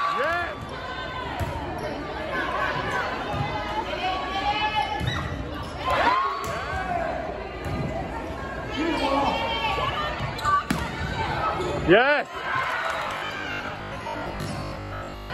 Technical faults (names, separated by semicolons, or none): robotic sound from repeated short buffers